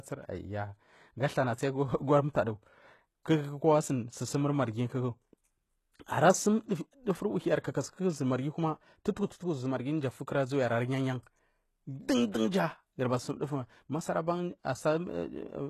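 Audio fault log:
Throughout, HE-AAC compression: nothing above 12.3 kHz, and the treble sounds synthetic and plainly damaged. It is likely rebuilt from copied lower bands, fitting about 16 kbps.
6.68–6.71 s and 12.32–12.34 s, pre-echo: a short hiss of 24 ms, then 20 ms, comes before each attack. Coding noise spread across the block fills the quiet gap.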